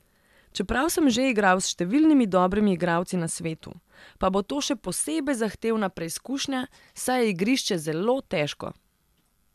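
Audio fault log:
No faults: the speech signal is intact and continuous, with nothing in its capture or transmission path audibly disturbing it.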